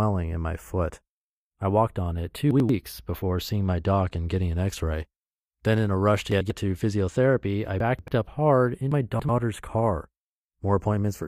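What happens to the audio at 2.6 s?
A short garbled moment runs from 2.51 to 2.69 s, right after "I walked on it" and before "before seeing my doc". These are chunks out of order. A block of about 93 ms arrived one chunk late, so it plays after the block that should follow it. No audio is lost, but the sequence is jumbled. Three hard joins form where the mismatched edges meet.

Under that, and through the whole clip, the two channels are drifting apart. They come from devices on separate clocks that differ by a few tens of parts per million. By the end, the offset between them reaches only a fraction of a millisecond. In mono, that sliding delay sweeps comb notches slowly through the spectrum, heard as a slow flanging at this moment too.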